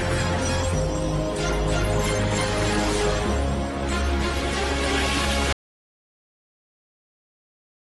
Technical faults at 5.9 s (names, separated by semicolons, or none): audio dropout to silence